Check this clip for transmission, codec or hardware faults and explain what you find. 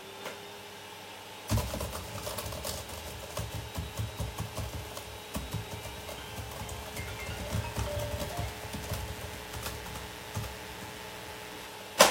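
One fault is present: mains buzz from 6.98 s to 11.67 s. Sharp switching spikes from the power supply couple into the signal twice per 60 Hz cycle, spreading harmonics well up into the kilohertz range. The result is a steady, raspy buzz sitting about 15 dB below the wanted audio.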